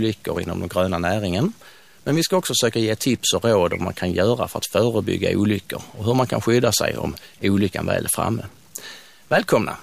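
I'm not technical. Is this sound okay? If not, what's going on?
No. All the way through this speech there is a grainy roughness, and the pauses between phrases are filled with a faint, gritty hiss instead of silence. That points to a stuck bit, most likely one digital line in the recording chain jammed on or off. This differs from ordinary background hiss, which stays steady, because the noise here changes with the voice. It also differs from clipping because it stays present during quiet moments, not only on loud peaks.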